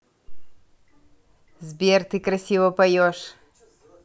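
No technical faults are audible.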